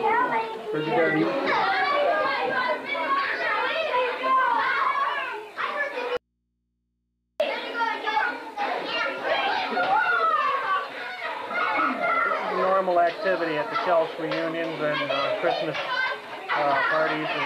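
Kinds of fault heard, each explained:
Audio dropout to a faint residue: the wanted signal was likely lost while the input stayed live, so for 1.23 s from 6.17 s the sound abruptly gives way to mains hum about 50 dB below.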